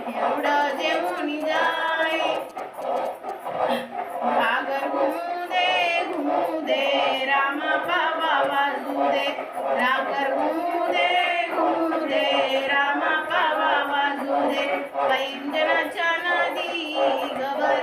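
A nearby 2G phone sending GSM signalling bursts, the short radio exchanges that precede an incoming call or text, is being rectified by the audio circuitry from 0.47 s to 3.31 s. The radio energy turns into audible interference: a galloping dit-dit-dit rhythm of brief buzzes pulsing at about 217 Hz, roughly 20 dB below the wanted sound.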